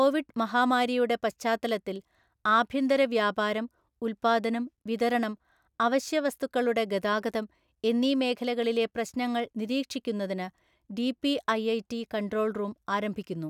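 No technical faults detected anywhere in the recording.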